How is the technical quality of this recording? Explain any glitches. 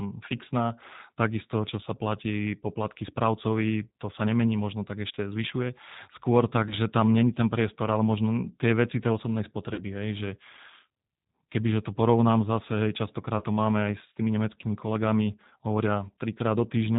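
The recording is clearly degraded by a low-bitrate phone codec and has four short concealed dropouts.

G.729 codec, throughout: the speech is rebuilt at 8 kbit/s from a vocal tract filter, a pitch predictor and a few pulses per frame, with nothing above 4 kHz. The codec damage is plainly audible, making the voice narrow, slightly rough and synthetic.

VoIP packet loss concealed by the speech codec, at 5.15–5.18 s after "sa nemení možno tak", 6.69–6.77 s before "tam není ten priestor", 9.74–9.82 s before "hej že", and 13.39–13.44 s: the decoder filled missing audio by extrapolating its last pitch and filter with falling gain. Each gap, about 20 ms, or 40 ms at 9.74 s, which fits one or two lost packets, becomes a brief fading smear of stretched sound, and the speech stays weak for a moment afterwards.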